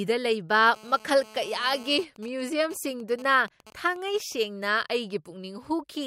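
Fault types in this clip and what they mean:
GSM phone buzz: From 0.74 to 2.04 s a hard, raspy buzz sits under the speech at about 21 dB below it, pulsing at 217 Hz and thick with harmonics that have nothing to do with the talker. A 2G handset on a call nearby is transmitting its radio bursts 217 times a second, and somewhere in the audio chain a junction rectifies that RF, turning each burst into an audible click.
GSM signalling bursts: From 2.04 to 4.45 s the steady buzz breaks into even ticks with a longer 217 Hz buzz twice a second, at roughly 20 dB below the speech. This fits the same phone staying in its call while its user goes quiet, so it sends only short groups of bursts instead of a continuous stream. The audio circuit demodulates each group into its own little rasp.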